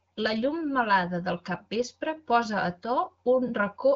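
No technical faults are audible.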